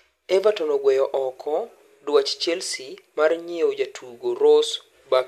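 Nothing stood out on listening to this speech recording.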